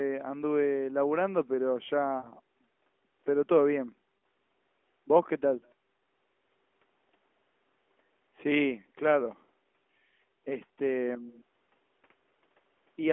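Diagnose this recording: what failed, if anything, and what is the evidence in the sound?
At 2.18 to 2.31 s the speech smears into a drawn-out sustain that sags in level before normal speech returns, and at 4.18 s there is a shorter dip and warble. These are lost AMR speech frames in the network stage. Radio errors corrupted frames, and the narrowband decoder filled each gap by repeating the last good pitch and vocal tract settings with falling gain. The gaps fit roughly three and two 20 ms frames.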